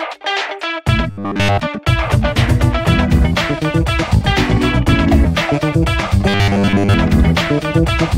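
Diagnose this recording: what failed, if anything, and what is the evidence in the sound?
Twice the sound collapses into a rigid, metallic buzz pitched at 100 Hz: from 1.11 to 1.60 s, where the passage is made up entirely of repeats, and again from 6.29 to 6.94 s, where most of it is. This is robotic sound from repeated short buffers, likely at the driver or buffer stage. Audio arrived too late, so playback looped the last 10 ms block and skipped the real signal, and that loop imposes the fixed 100 Hz tone.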